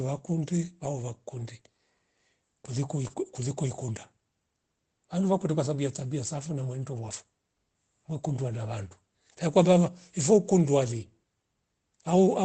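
Short concealed packet loss at 3.07 to 3.11 s: about 20 ms of audio failed to reach the decoder in time, and for roughly the first 15 ms the receiver extended the preceding speech to cover the hole. The result is a brief smear in the speech.

Lost packet rebuilt from error correction at 3.09 to 3.11 s and 7.05 to 7.11 s: the first repair covers 20 ms, which fits a single lost packet. It takes over from the concealment and closes the gap without silence. The second covers 40 ms, which points to two packets. In both, the decoder played the low-bitrate copies carried in the following packets of the Opus stream, so those stretches sound rougher and noisier than the surrounding speech, which is itself limited to about 8 kHz by the call codec.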